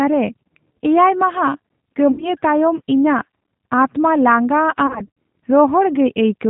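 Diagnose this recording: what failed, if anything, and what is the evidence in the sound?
The codec stage failed first. Throughout the speech, the sound is band-limited and slightly rough, with a synthetic edge. Nothing above 4 kHz comes through. The damage is plainly audible. This is the G.729 codec, apparently the G.729A variant at 8 kbit/s. It rebuilds the voice from a vocal tract filter, a pitch predictor and a few pulses per short frame. The waveform itself is never sent.

The network stage failed too, and the codec covered it up. At 2.12 to 2.28 s the voice smears into a buzzy tone or coloured noise that fades. About 60 ms of audio is missing, which fits two lost packets. From 4.87 to 5.08 s it happens again, worse. About 150 ms is lost across a 300 ms stretch, in bursts of up to 60 ms. This is VoIP packet loss concealed by the speech codec. The decoder repeats its last pitch and filter at falling gain, so the voice stays weak briefly afterwards.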